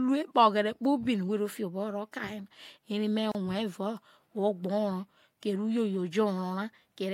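A speech recording assembled from separately encoded pieces joined without trimming has a gap at a join of encoded pieces: encoder start-up delay and last-frame padding survive, opening a silence of about 32 ms from 3.32 to 3.35 s, with smeared edges, before speech resumes where it stopped.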